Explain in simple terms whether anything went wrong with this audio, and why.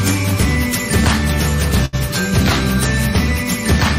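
At about 1.85 seconds the audio briefly freezes: a short stall from a late packet. One chunk of audio arrived late, and the player, having nothing new to play, stretched the last sound for roughly 75 milliseconds until the chunk showed up at about 1.95 seconds. Nothing is skipped, and playback resumes exactly where it left off, only slightly later. That separates it from a lost packet, where a piece of the audio would be gone.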